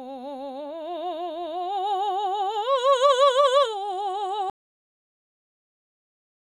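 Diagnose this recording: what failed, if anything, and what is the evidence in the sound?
A cut-off end, at the storage or buffer stage: the music stops mid-sound at 4.50 s and drops straight to digital silence with no decay. The final buffers were never written, so the waveform ends abruptly and the spectrogram goes uniformly blank thereafter.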